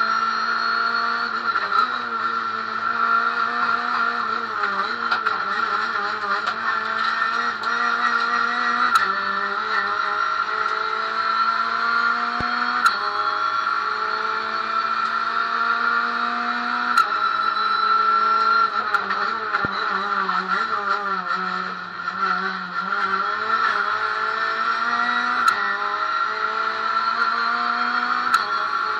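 A voltage spike, likely from a plug, switch or static discharge, twice enters the chain, causing a loud pop at 12.41–12.43 s, roughly 15 dB above the sound, and again at 19.65–19.67 s, roughly 10 dB above, with the audio continuing underneath.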